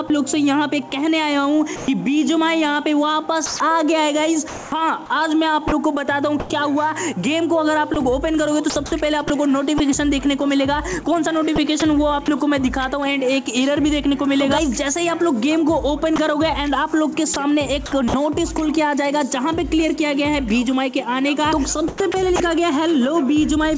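A voice detector likely mistook sound for background twice, and the sound dropped by the voice detector gives way to comfort noise at 0.08–0.10 s and 1.76–1.88 s. In five stretches (3.46–6.50 s, 7.94–9.80 s, 11.56–12.28 s, 16.16–18.14 s and 21.88–22.40 s), the detector likely toggles repeatedly, so the audio is chopped by the voice detector. Throughout, the call path removes everything above 8 kHz, consistent with a G.722 codec.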